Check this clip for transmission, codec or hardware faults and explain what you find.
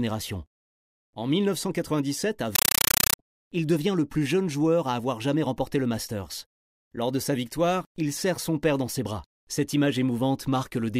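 One fault is present. From 2.55 to 3.19 s, just before "il devient le plus", the speech is replaced by very loud, harsh chattering static that pulses about 31 times a second, each burst lasting roughly 8 ms before dropping to silence. This is a compressed stream played as audio. The link passed an encoded bitstream, which fits AC-3, to the output as if it were ordinary samples. Each coded frame's data comes out as a short noise burst followed by zero padding.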